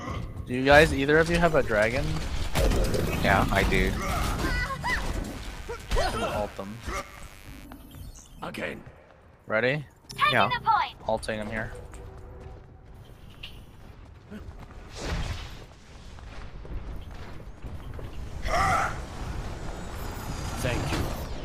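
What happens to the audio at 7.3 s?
At 7.3 s a steady, raspy buzz sits under the sound, part of a stretch of mains buzz running from 5.28 s to 7.67 s. It is fairly quiet, roughly 25 dB below the programme. The rasp comes from sharp switching spikes, of the kind a dimmer, rectifier or unshielded cable lets in, recurring twice per 50 Hz mains cycle. That spiky repetition stacks up harmonics of 50 Hz reaching into the kilohertz range.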